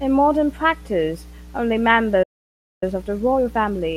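Mains hum runs through the whole recording, a steady low tone at 60 Hz sitting roughly 20 dB below the speech, most likely from a ground loop or nearby transformer. On a spectrogram it shows as an unbroken horizontal line at 60 Hz, with fainter harmonic lines above it.

At 2.23 s the speech halts in mid-flow for about 0.59 s, until 2.83 s. This playback stall was likely caused by the player running short of data or its thread being blocked. The waveform drops to a flat line across the gap, and the spectrogram shows a blank vertical band.

From 2.83 s to the end, a time-compressed catch-up hurries the speech at about 1.15 times normal speed while keeping its pitch, as the player trims its backlog by cutting and cross-fading short slices. Spectrogram harmonics look jagged at the splice points.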